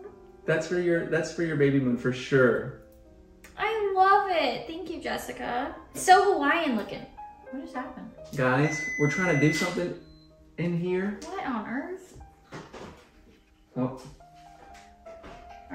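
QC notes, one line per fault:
0.0–9.76 s, sample clock jitter: the converter's sampling clock wanders by something on the order of a microsecond, so each sample is captured a little early or late at random. Where the waveform changes fastest, that timing slip becomes an amplitude error, leaving a grainy hiss roughly 40 dB below the signal. The roughness thickens on loud, bright passages and fades in quiet gaps, and it stops once the clock settles at 9.76 s.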